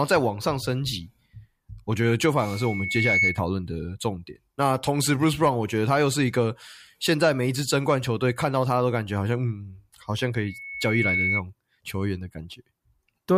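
Loudspeaker feedback squeal shows up twice, 2.43 to 3.42 s and 10.43 to 11.42 s: a 2.2 kHz tone swelling over most of a second as the mic hears its own speaker and loop gain tops one, first poking above the speech, then sitting level with it.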